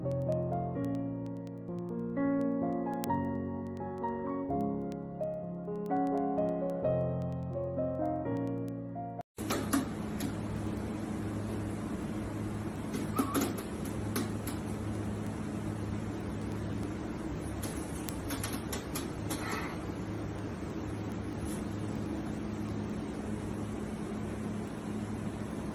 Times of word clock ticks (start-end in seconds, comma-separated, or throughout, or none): 0.12-25.72